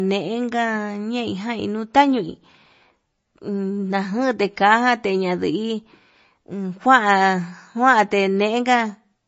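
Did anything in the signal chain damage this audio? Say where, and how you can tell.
Yes. The damage sits at the codec stage and runs through the whole recording: this speech carries plainly audible MP3 compression artefacts. Nothing comes through above 7.6 kHz, a hard treble ceiling. The sound has a watery, swirly quality as weak spectral lines drop in and out between frames, s sounds carry metallic chirps, and attacks smear. The likely cause is MP3 encoding starved of bits, which fits a low bitrate around 32 kbps.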